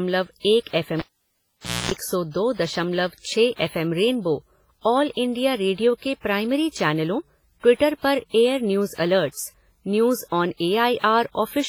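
WMA compression runs through the whole recording. The speech has a ringing, washy quality, with a hiss that rises and falls with the signal and heavy codec damage. That likely comes from low-bitrate transform coding, around 24 kbps, where quantisation noise smears across long blocks and weak spectral detail drops out.

A cable pulled and plugged in interrupts the audio from 0.99 to 1.91 s, ending just before "सौ दो". A pop opens a gap of about 874 ms of near silence, including a burst of 60 Hz mains buzz lasting about 241 ms while only the plug tip made contact. A second pop marks the sound's return.

Pre-echo appears at 3.56 s, just before "एफ़एम रेनबो ऑल", spreading 35 ms ahead of the attack, and again at 10.99 s, spreading 51 ms. In each case the transform block's quantisation noise, sized for the loud onset, leaks into the quiet moment before it, so a short hiss precedes a softened, smeared attack.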